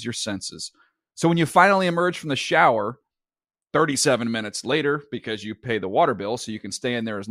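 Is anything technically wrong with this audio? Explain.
No technical faults are audible.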